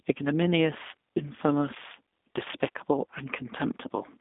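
Speech, and it's been through a G.729 codec the whole way: nothing above about 3.8 kHz, a narrow phone-line band from 250 Hz to 3.6 kHz, and that rough, slightly synthetic edge from rebuilding the voice out of a filter and a few pulses, which fits an 8 kbit/s VoIP link.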